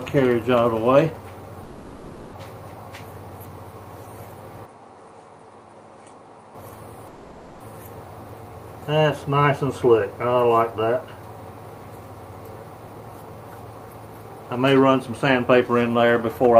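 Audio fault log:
1.63–2.35 s and 7.07–7.62 s, call audio freeze: the sound stalls and the last instant is stretched into a fading buzz-like tail for about 0.70 s and then 0.53 s, with no drop to silence. Afterward the audio resumes exactly where it stopped, so nothing is lost but the clip falls further behind each time. The likely cause is delayed packets draining the jitter buffer. On a spectrogram each freeze shows a smeared, decaying band with no new onsets, and the waveform envelope tapers smoothly until the audio picks up again.
4.65–6.55 s, input switched to a poorer device: the sound abruptly turns duller and a little quieter, roughly 5 dB down, with no gap at either change. A new, faint background noise sits roughly 40 dB below the signal. This is likely a switch to a narrower-band microphone and back. On a spectrogram, energy stops cleanly at 10.5 kHz for this span and a thin, even noise floor appears. 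The waveform steps down in amplitude at 4.65 s and back up at 6.55 s.
12.80 s to the end, jitter buffer speed-up: the audio runs about 113% of normal speed and feels rushed, yet its pitch stays unchanged. The receiver trims short pitch-period slices again and again to shed excess buffered delay, roughly half a second in total here. On a spectrogram, harmonics hold their frequencies while events crowd closer together in time. The waveform shows small, frequent splice points where cycles were cut out.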